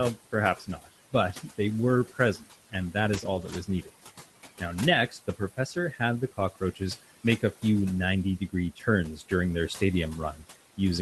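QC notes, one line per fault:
Throughout: noise suppressor artifacts. The room noise sits about 16 dB below the speech, and the suppressor pulls it down by about 16 dB wherever it judges a band to be steady noise. It decides this frame by frame, so the noise drops away in pauses and swells back under the speech.
0.32–1.59 s, 2.14–3.91 s, 5.08–6.81 s, 8.39–9.32 s, 10.33–10.44 s: speech cut by the noise suppressor. In each span the suppressor mistakes part of the speech for background and turns it down with the noise. The deepest drops are about 14, 13, 17, 15 and 11 dB. Only a few hundred milliseconds in each of the first four spans are affected, and about a tenth of a second in the last. The affected speech sounds swallowed or faint.
3.13–3.55 s, 5.73–5.79 s, 9.03 s: lost packet rebuilt from error correction. Audio went missing in transit, and the decoder filled each hole from the low-bitrate backup copy carried in the following Opus packet, so nothing drops out. 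The first repair covers 220 ms, which fits a run of about eleven 20 ms frames. The second covers 40 ms and the third one short frame. The patched stretches sound rougher and grainier than the audio around them.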